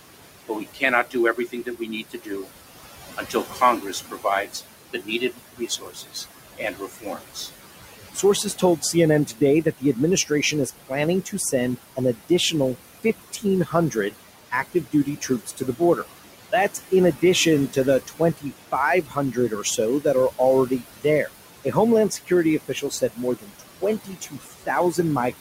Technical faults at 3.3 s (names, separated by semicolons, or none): noise suppressor artifacts; speech cut by the noise suppressor